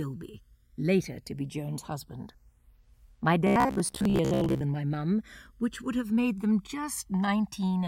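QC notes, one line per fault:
throughout: channels drifting apart. A clock mismatch of roughly 200 ppm slides the interchannel delay to about 1 ms; mono sum shows slowly sweeping comb notches, heard as flanging.
3.47–4.61 s: robotic sound from repeated short buffers. A fixed 66.7 Hz metallic buzz. The waveform shows identical 15 ms segments looping, and the spectrogram shows rigid harmonic lines. Most audio is lost, likely from starved buffers.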